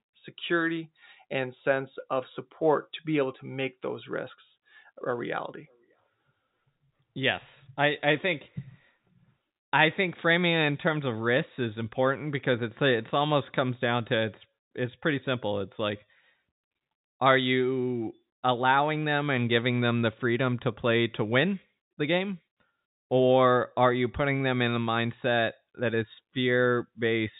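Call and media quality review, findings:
No faults found; G.711 telephone-band path as expected.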